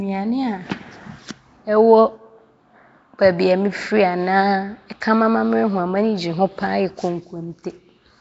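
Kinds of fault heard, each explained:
Nellymoser compression: Throughout, the speech carries a rough, hissy halo and a smeared, underwater quality, with nothing above 7.7 kHz. This is likely Nellymoser Asao at a setting that fits 32 kbps, where weak bands get no bits and are filled with noise.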